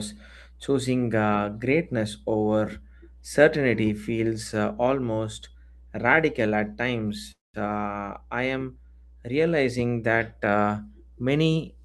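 A steady mains hum at 60 Hz runs throughout, roughly 20 dB below the speech, from power-line interference coupling into the signal path.

At 7.31 to 7.56 s a call audio freeze occurs: the sound stretches into a brief fading buzz or hiss, then about 180 ms of silence, likely from delayed packets emptying the jitter buffer. Playback then resumes where it stopped, adding a 227 ms gap with nothing missing.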